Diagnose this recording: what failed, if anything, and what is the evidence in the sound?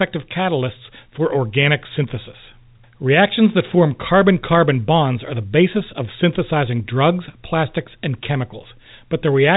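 Nothing has failed: the speech carries the expected band limit of G.711 telephone coding, with nothing above 3.8 kHz and only the faint level-following quantisation noise that channel always leaves beneath the signal.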